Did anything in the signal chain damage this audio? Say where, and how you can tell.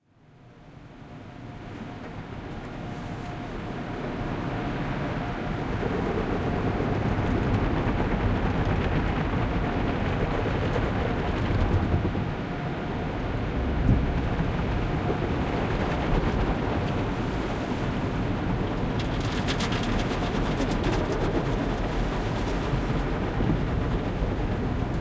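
No, nothing in the signal chain audibly damaged these sounds, and the signal shows no faults in level, timing or bandwidth throughout.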